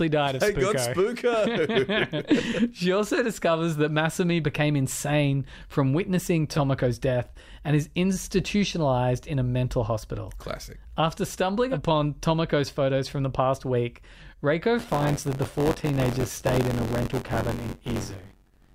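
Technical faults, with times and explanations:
14.78–18.74 s: buffer tearing. The speech takes on a robotic buzz at 93.8 Hz until the clip ends. Writer and reader of the ring buffer have slipped. A small slice of each period replays audio about 20 ms old, with hard joins. The rate fits a 512-sample buffer.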